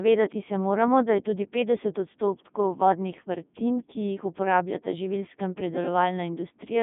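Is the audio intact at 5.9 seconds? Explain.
No. At 5.9 seconds, as throughout the clip, the speech has passed through a Codec 2 vocoder at 3.2 kbit/s. The decoder rebuilds the voice from sine waves out of pitch, voicing and an envelope, so it sounds heavily robotic and buzzy, confined to 150 Hz–3.6 kHz with nothing above 3.7 kHz.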